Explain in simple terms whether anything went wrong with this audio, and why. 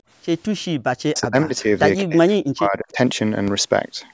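Two things went wrong. From 1.09 to 1.69 s and again from 2.04 to 2.97 s, the speech drops sharply. This is speech suppressed in double talk, likely because both sides spoke at once and the echo canceller turned this talker down along with the echo.

At 3.48 s there is a single low thump or click. This is a DC step: the waveform's zero line suddenly jumps and then slowly drifts back. Unlike a sharp click from damaged data, the speech carries on unchanged through it.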